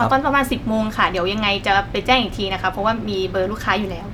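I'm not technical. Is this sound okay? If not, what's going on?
Yes, nothing in this speech recording stood out as a problem when listening to it.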